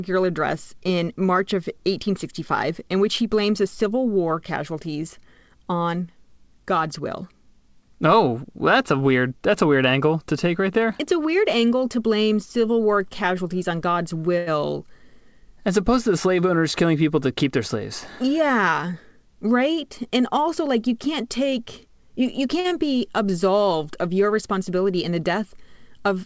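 A short stall from a late packet occurs at 14.38 to 14.49 s. A packet missed its playout time, the jitter buffer ran dry, and the receiver stretched the last sound by 86 ms until the data arrived. It then resumed from the same point, so nothing is lost, but the sound is held too long and everything after it plays 86 ms later.

A jitter buffer speed-up runs from 16.42 to 17.75 s. The buffer had built up more audio than its target, so the receiver trimmed short pitch-period-length pieces again and again. In total it removed about a tenth of a second. Speech plays at 106% speed with its pitch unchanged, and at that rate it sounds hurried.

A second short stall from a late packet occurs at 22.60 to 22.66 s. It has the same mechanism as the first: the buffer emptied and the last sound was extended, here by 47 ms, with nothing missing. The delay grows by another 47 ms.

Short concealed packet loss follows at 22.68 to 22.72 s. 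These 20 ms never reached the decoder, so the receiver continued the preceding sound to fill the gap and blended back into the real audio. This is heard as a brief smear, and a short consonant could drop out.

Throughout the clip nothing is heard above 8 kHz, which fits a G.722 call path at 64 kbps.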